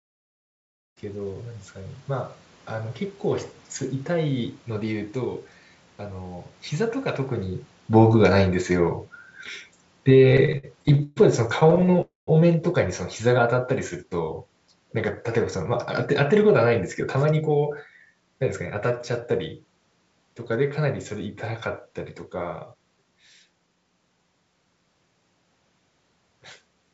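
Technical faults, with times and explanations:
6.72 to 17.8 s, automatic gain falling: the level sinks by about 12 dB along with the room noise, as the gain control decided the input was too loud.
10.32 to 11.19 s and 11.60 to 12.00 s, repeated stalls (stutter): ten and then eight small holds, up to 131 ms, where late packets drained the jitter buffer and the last sound was stretched, so the audio drags.
12.01 to 12.30 s, call audio freeze: about 260 ms is filled with a fading continuation that goes silent for about 150 ms before the audio resumes where it stopped. The likely cause is packets held up in transit.
16.33 to 17.42 s and 22.73 to 23.76 s, jitter buffer speed-up: the audio runs at 105% and then 110% with unchanged pitch, as the receiver trimmed roughly 70 ms and then 100 ms of pitch periods to cut its backlog, so it sounds hurried.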